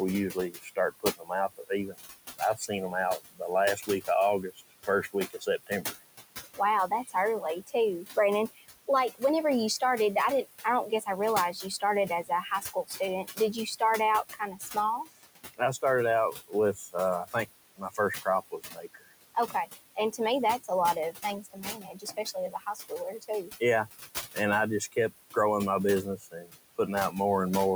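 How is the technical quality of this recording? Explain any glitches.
The recording has two related problems, both from a noise suppressor working hard against room noise that sits about 12 dB below the speech.

Noise suppressor artifacts run through the whole clip. The suppressor pulls down the bands it judges to be steady noise by about 16 dB, frame by frame, so the background drops away in pauses and returns under the talking.

Speech cut by the noise suppressor happens in five stretches: 0.31–5.96 s, 6.57–9.22 s, 10.44–23.61 s, 24.34–25.36 s and 26.04–27.14 s. Quiet parts of the speech get mistaken for noise and are turned down with the background, by about 21, 20, 21, 17 and 19 dB at their deepest. Soft consonants and word endings sound swallowed or faint, adding up to roughly a second and a half in the first stretch, a few hundred milliseconds in the second, about three seconds in the third, a brief moment in the fourth and a few hundred milliseconds in the last.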